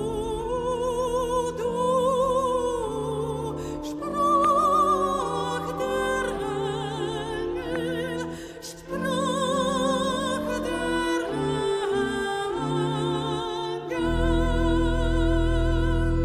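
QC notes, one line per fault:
4.45–4.47 s and 7.76–7.78 s, loud pop: Two single sharp pops sit on top of the sound, which carries on underneath. The first peaks roughly 15 dB above it, the second roughly 10 dB. A likely cause is a sudden voltage pulse from a switch, plug or static.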